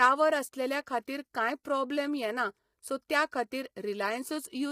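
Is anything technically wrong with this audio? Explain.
Yes, there are two problems. Throughout the speech there is heavy low-delay AAC compression, likely from AAC-ELD. The short transform frames resolve pitch harmonics poorly, so the voice sounds rough and grainy, with noise filling the gaps between harmonics and a synthetic-sounding top band. This points to a low bitrate, roughly 24 kbps.

From 0.02 to 0.06 s there is hard clipping, overdriven by about 2 dB. Peaks exceed what the stage can pass and are cut flat, adding high harmonics. The result is a brief crackle on those peaks, confined to that short span rather than spread across the whole clip like the codec roughness.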